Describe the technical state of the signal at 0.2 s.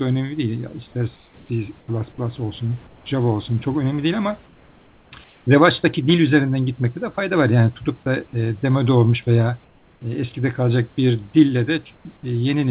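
At 0.2 s the audio is intact, with no dropout, glitch or distortion at that moment.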